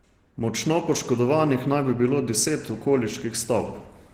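From start to finish the speech has a muffled, hoarse quality with a grainy roughness on top, and that's plainly audible throughout. The likely culprit is Opus compression running in its hybrid speech mode, which fits a low bitrate of around 16 kbps. At that budget the encoder can't code the upper bands properly, so it fills them with noise instead, and that's where the grit and the dulled edges come from.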